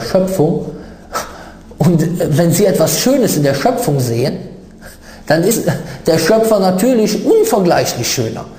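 At 4.27 s and again at 5.5 s, compressed frames are skipped: the audio jumps ahead about 30 ms, then about 70 ms, consistent with 26 ms frames.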